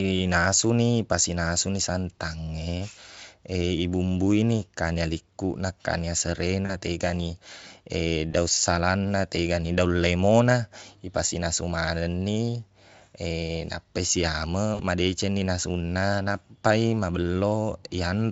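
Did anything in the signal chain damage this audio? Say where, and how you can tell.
Yes. VoIP packet loss concealed by the speech codec is audible at 6.65 to 6.71 s, just after "kanya likkuna kanya", again at 8.31 to 8.35 s, and at 14.75 to 14.81 s. This is a network-stage fault. Each gap sounds like a brief smeared stretch of buzzy tone or coloured noise that sags in level where about 40 ms, 20 ms and 40 ms of audio went missing. The gaps fit two, one and two 20 ms Speex frames. The Speex decoder bridged each hole by repeating its last pitch and filter at falling gain. Because the decoder's state carries forward, the sound stays weak or distorted for tens of milliseconds or more after packets resume.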